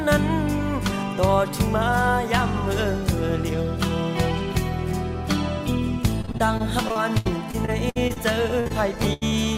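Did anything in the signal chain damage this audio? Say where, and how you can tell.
Yes. The damage happened at the network stage, as repeated packet loss (robotic sound). It covers two stretches, 6.21 to 8.18 s and 8.60 to 9.33 s. You hear choppy audio with pieces missing. Dropouts come in quick succession, many in the first stretch and several in the second. The longest last about 72 ms and 82 ms. Each hole is patched by stretching the preceding sound, and that synthetic fill gives the robotic tone. Roughly a fifth of the first stretch and under a third of the second is concealed this way.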